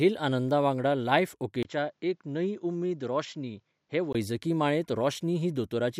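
A speech recording whose input likely switched to a poorer device from 1.63 to 4.15 s: after a 20 ms gap, the sound loses everything above 7.6 kHz, drops by about 5 dB in level, and carries a faint new background noise.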